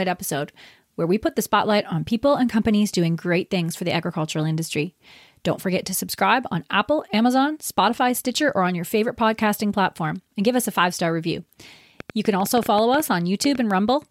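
A train of clicks runs from 12.00 to 13.56 s in this speech recording, starting right after "a five star review". Around fifteen pulses of much the same shape arrive at an uneven pace, averaging 7.7 per second, and they stand out by roughly 5 dB above the speech. Something is repeatedly injecting a pulse into the signal, likely interference from nearby equipment or a faulty connection or power supply.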